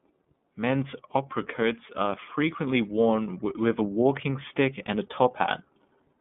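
iLBC codec damage runs throughout: speech confined to roughly 150 Hz–3.5 kHz sounds plainly rough and synthetic, consistent with 30 ms independently coded frames at 13.33 kbps.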